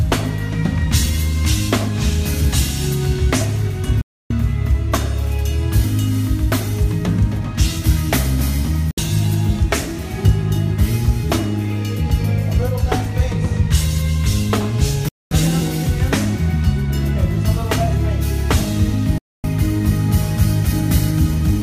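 The receiver lost the digital signal four times, at 4.01, 8.91, 15.08 and 19.18 s, and each time muted until good frames returned: a digital broadcast dropout. The sound fades to silence within about 3 ms and comes back later, leaving holes of 288, 64, 224 and 256 ms. These lengths suggest whole 32 ms frames being discarded. Whatever was broadcast during each gap is simply missing.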